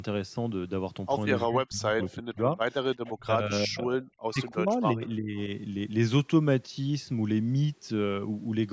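Speech suppressed in double talk, 1.46 to 2.59 s: the speech dips by up to about 40 dB, likely because the echo canceller mistook overlapping talk for loudspeaker echo and turned it down. Echo leak, 3.06 to 3.11 s: a brief, faint copy of the speech returns 348 ms late, about 20 dB below it, likely residue the canceller missed. Speech suppressed in double talk recurs at 3.17 to 4.03 s, dipping up to about 35 dB, and again at 4.21 to 5.38 s, up to about 40 dB, each likely the same misjudged double talk. Within that last stretch, echo leak returns at 5.03 to 5.10 s, again 348 ms late, about 30 dB down, likely another escaped fragment.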